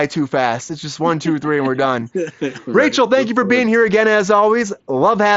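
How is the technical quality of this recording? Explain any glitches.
No glitches to report; the speech stays steady throughout, carried over a Bluetooth mSBC headset link whose wideband limit shows as nothing above 7.7 kHz.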